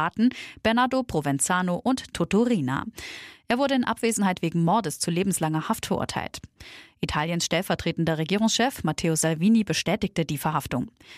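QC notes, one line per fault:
No faults heard in this clip.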